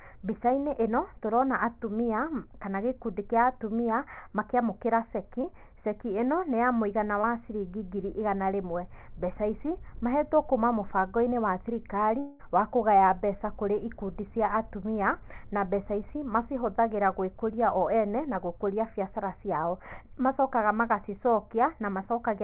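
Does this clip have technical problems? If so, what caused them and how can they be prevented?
Yes. Short concealed packet loss at 5.42–5.45 s and 7.21–7.25 s: brief packet gaps were bridged by extending the preceding sound, showing as a smeared blur on the spectrogram. Forward error correction and a slightly deeper jitter buffer would prevent this.

From 12.19 to 12.41 s the sound turns into a buzz or hiss that fades away, then resumes with part of the audio gone, likely a long network dropout. On the waveform the envelope is a smooth decay. A more stable network path or a wired connection would prevent it. The band limit at 4 kHz comes from the G.711 call path.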